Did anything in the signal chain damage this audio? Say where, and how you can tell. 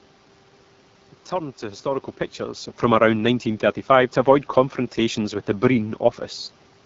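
Yes. AMR wideband (HD Voice) codec damage runs throughout, at the codec stage. The speech sounds rough and raspy because 8.85 kbit/s is too few bits for the pulse excitation model. Above 6.4 kHz there is only shaped noise. The room noise and the level change near 2 s come from the recording itself.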